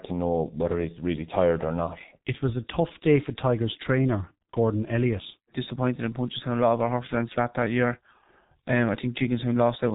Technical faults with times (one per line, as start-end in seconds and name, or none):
0.00-9.95 G.723.1 codec